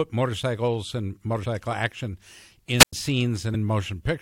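At 1.44 s, just after "motorcycles and", compressed frames were skipped. The decoder dropped a short run of frames, roughly three at 23.2 ms each, which fits 1024-sample frames at 44.1 kHz, so about 70 ms of speech is lost. Because the surrounding frames overlap, the join is a short smeared blip rather than a sharp click. On a spectrogram, the harmonic pattern jumps abruptly without a full-height vertical stripe. The same skip recurs at 3.53 s.

From 2.78 to 2.93 s there is a wireless microphone squelch dropout. The radio signal faded, and the receiver's squelch gate muted its output for about 100 ms. You hear hiss swell briefly, then a hole of near silence before the voice returns. On a waveform this shows as a thin band of noise collapsing to a flat line. On a spectrogram it appears as broadband haze followed by an empty gap across all frequencies.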